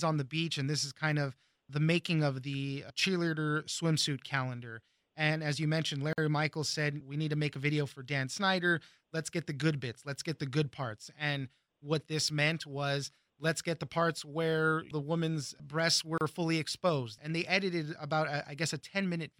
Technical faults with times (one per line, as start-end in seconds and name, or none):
6.13-6.18 gap at a join of encoded pieces
16.18-16.21 gap at a join of encoded pieces